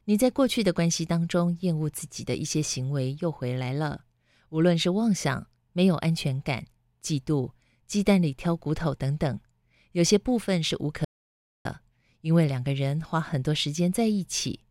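A speech recording with one audio dropout to silence. At 11.05 s the sound cuts out abruptly and returns at 11.65 s. For about 0.6 s there is only silence, with no room tone. The input was likely lost briefly while recording continued, so that speech is gone.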